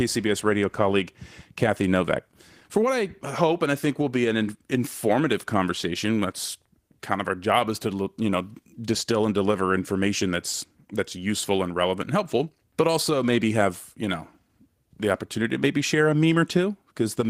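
No technical faults can be heard in the speech at any point.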